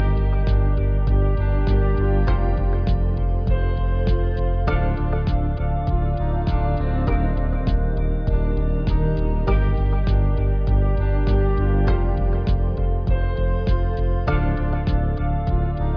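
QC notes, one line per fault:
No faults to note.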